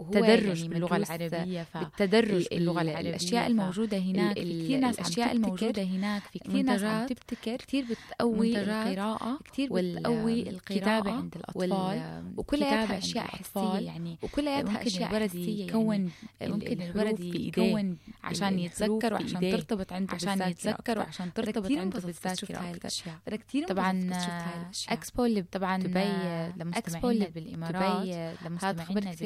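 A second capture path running behind the first, or an edit that left two misaligned copies in place, has likely mixed this speech in twice, producing a doubled audio track that runs for the whole clip. The second copy trails by roughly two seconds at about the same loudness as the first, so every phrase returns as a full-band repeat. It has no decay or room colour, and the two copies talk over each other.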